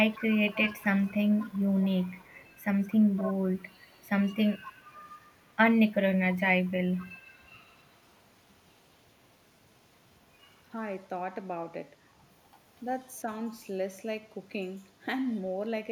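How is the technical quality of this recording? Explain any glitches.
There's an echo leak in this speech: a faint copy of the talker comes back about 241 ms late, around 20 dB down from 0.09 to 5.49 s, then much quieter at 6.64–8.22 s and briefly at 13.01–13.06 s. Most likely a speakerphone's echo canceller letting some of its mic pickup through.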